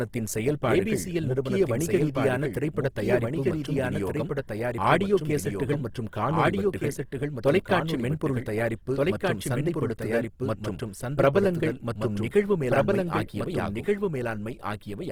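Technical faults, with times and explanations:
Throughout, doubled audio track: likely a slower second capture path mixed back in, so a full-band copy trails about 1.5 s behind, roughly 5 dB quieter, without room colour.
Throughout, Opus compression: likely a CELT-mode encoder starved of bits, fitting about 16 kbps, fills bands with folded or noise content, so tones sound plainly noisy, rough and grainy.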